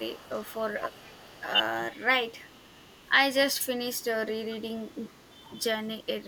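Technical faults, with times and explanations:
0.00–1.45 s, 2.45–3.07 s, 3.54–3.63 s, 3.96–5.63 s and 6.03–6.16 s: echo leak. A faint, delayed copy of the speech trails it by 441 ms. It sits about 25 to 35 dB below the speech. A loudspeaker's pickup likely slipped past an echo canceller.
0.79–1.02 s, 1.37–1.41 s and 1.98–2.09 s: speech suppressed in double talk. The speech briefly dips and thins. The first drop is deepest, near 20 dB, and the others are shallower. An echo canceller likely confused overlapping talk with echo and turned both down.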